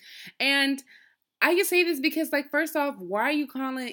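No technical faults can be heard in this speech.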